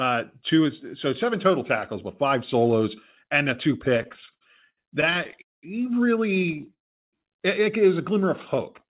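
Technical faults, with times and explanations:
3.98 to 5.40 s, repeated stalls (stutter): the sound drags and hiccups through this stretch, with about 20 short gaps of up to 71 ms that add roughly 315 ms, about 22 percent of the span. Packets kept arriving late, so the jitter buffer ran dry repeatedly and the receiver stretched the last sound to bridge each wait. Nothing is lost, but the flow stutters over the narrowband, 4 kHz-limited call audio.
5.42 to 5.65 s, call audio freeze: the sound halts for about 209 ms, with a brief smeared continuation that then drops to about 190 ms of silence before resuming exactly where it stopped. The likely cause is packets held up in transit, leaving the jitter buffer empty, so the receiver padded the wait and then carried on 209 ms later than before.
6.35 to 6.74 s, repeated stalls (stutter): a second, finer stutter of 9 small gaps, none longer than 14 ms, adding about 90 ms, roughly 23 percent of the span. 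Late packets again starved the jitter buffer over and over, and each brief wait was covered by extending the last sound, so the audio jitters and lags without any gaps in content.
6.74 to 7.15 s, call audio freeze: a longer halt of about 388 ms, mostly dead air at about 370 ms of silence after a short fading continuation, then the audio picks up where it left off. Packets were likely delayed on the network, emptying the jitter buffer, so this wait is inserted into the timeline and everything after it plays about 388 ms later.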